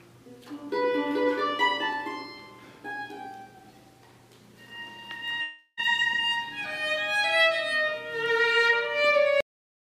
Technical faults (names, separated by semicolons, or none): long network dropout; cut-off end